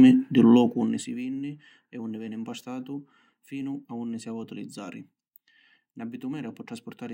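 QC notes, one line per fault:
0.54–1.2 s, zipper noise: after "di lu", speech drops roughly 20 dB in coarse steps, around 50 per second, each unsmoothed step ticking audibly, ending before "vinni e unni veni".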